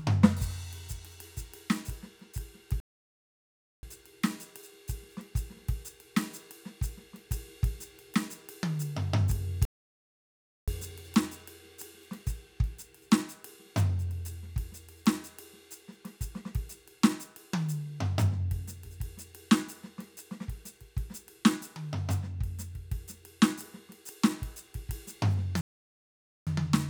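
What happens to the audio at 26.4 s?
At 26.4 s the music is inside a playback stall running from 25.61 s to 26.47 s: the output drops to silence mid-flow for about 0.86 s, then resumes. The likely cause is the player running out of buffered data or its thread being blocked.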